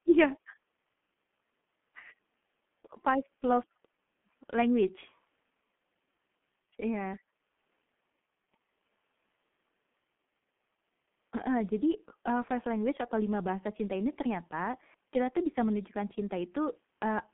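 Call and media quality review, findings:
G.723.1 codec, whole clip: muffled, hoarse speech, smeared consonants, heavy damage. Nothing above about 3.4 kHz, thin bottom below 150 Hz. Sounds like a 6.3 kbit/s low-rate telephony leg, 30 ms frames, slow voice-model updates blurring fast transitions.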